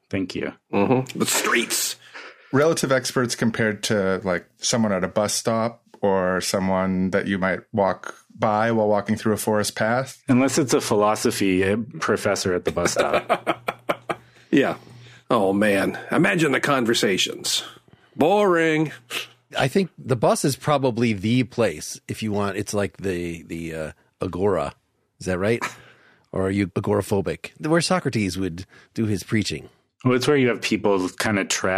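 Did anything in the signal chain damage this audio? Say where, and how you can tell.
No, nothing audible points to damage at any stage of the signal chain.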